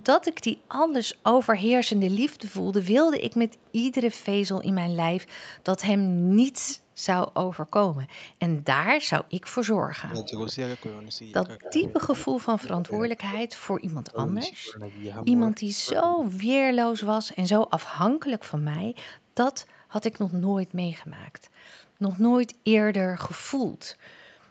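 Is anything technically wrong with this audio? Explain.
Yes. The speech carries two echo-canceller faults, each appearing twice.

Echo leak, from 0.0 to 6.76 s and again from 10.24 to 12.68 s: a delayed copy of the speech trails the original by about 217 ms. In the first stretch it sits roughly 30 dB below the speech, a faint ghost. In the second it rises to about 15 dB below. The likely cause is a far end on loudspeaker whose echo canceller left part of its microphone pickup in the return path.

Speech suppressed in double talk, at 6.2 to 6.25 s and from 10.02 to 17.35 s: the speech level drops while the other side is also talking. The first event is a brief dip of around 10 dB lasting about 50 ms. The second is heavier: repeated cuts reaching roughly 30 dB, adding up to about 3 s of attenuated or missing speech. This likely comes from the canceller failing to tell local talk from echo and ducking both.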